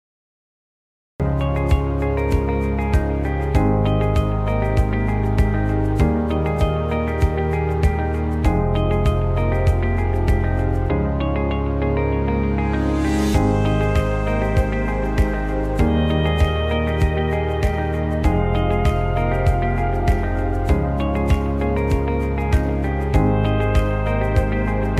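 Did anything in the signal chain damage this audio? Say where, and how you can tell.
Yes. A cut-off start at capture: digital silence until 1.20 s, then sound already under way, with no attack or fade-in, unlike a gentle gain ramp or a mid-clip dropout.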